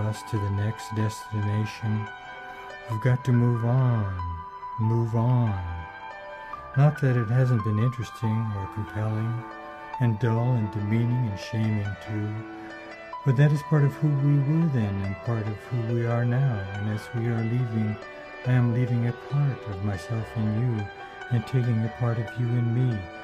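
No technical faults can be heard anywhere in the audio.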